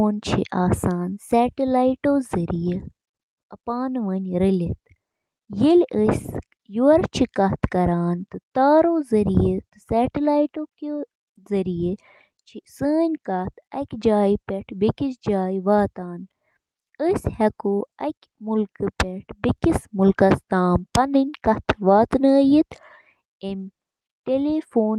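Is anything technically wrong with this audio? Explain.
No, nothing technically wrong stood out on listening to this speech recording.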